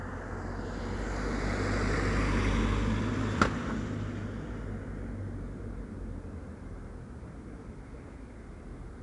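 From start to finish the audio carries 4-bit ADPCM compression. Each sample is coded as a small step from a predicted value, with an adaptive step size, so the coding error is a gritty, broadband hiss that swells and shrinks with the signal. That level tracking sets it apart from steady tape or background hiss, which stays put in quiet moments. The damage is plainly audible, at a rate of 88 kbps.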